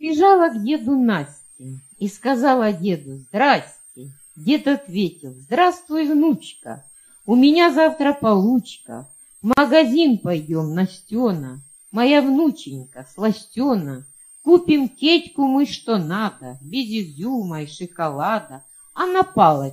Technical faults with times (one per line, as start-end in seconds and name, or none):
9.53-9.57 gap at a join of encoded pieces